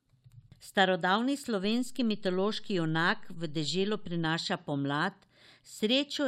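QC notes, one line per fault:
1.64–4.25 s, DC step: waveform baseline shifts about -41 dBFS off zero, then returns; each edge thumps, showing as brief low-frequency smears on the spectrogram.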